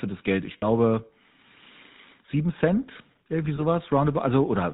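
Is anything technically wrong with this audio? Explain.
Yes. The speech runs through a GSM full-rate codec throughout, consistent with 13 kbps: pulse-driven vocal-tract modelling and no content above 4 kHz produce an audible buzzy, gravelly roughness.

There are lost GSM frames at 0.58–0.63 s and 3.56–3.61 s. The decoder repeats the last good frame, giving a brief metallic ring. The 40 ms and 20 ms gaps fit two frames and one frame.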